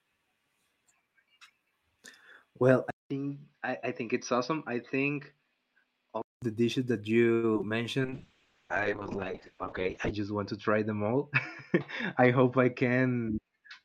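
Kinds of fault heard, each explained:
input switched to a poorer device: From 2.9 s to 6.4 s the speech suddenly turns dull and boxy, with nothing above 5.9 kHz, a level about 5 dB lower and a faint new background noise, after a silence of about 200 ms at the switch. The likely cause is the recording moving to another microphone or headset. Unlike a bitrate drop, the tone and noise change all at once, and the speech isn't rough or watery.
repeated packet loss (robotic sound): Between 7.33 s and 7.72 s the speech breaks up into a choppy stutter. Lost stretches keep being patched by stretching the previous sound, about 150 ms in total, or 38% of the span, with about 60 ms simply missing and the longest hole 96 ms. Unlike a device switch or bitrate drop, it comes and goes in quick bursts rather than staying as a steady change in tone.
call bitrate drop: From 8.02 s to the end the speech sounds rough, watery and muffled, with the top end cut from full range to about 8 kHz. 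That fits the encoder being pushed from around 48 kbps down to 6 kbps, staying at its lowest for about 2.1 s. Unlike packet loss, the sound stays continuous with no stutter, and unlike a device switch, it comes with coarse coding artefacts rather than a new background.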